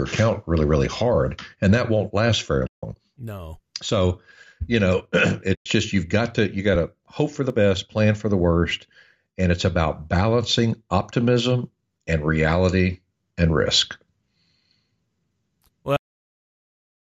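A speech clip with two muted gaps from AAC frame loss with muting: 2.67 to 2.83 s (160 ms) after "that won't last very", and 5.55 to 5.66 s (110 ms) just before "just you've got to". The edges fade softly, which distinguishes concealment muting from a hard dropout. The light roughness in the audio likely comes from low-delay AAC compression, whose short frames fit these gap lengths. At 15.96 s there is a cut-off end: the sound stops mid-utterance and drops straight to digital silence with no decay, unlike a natural fade or trailing room tail.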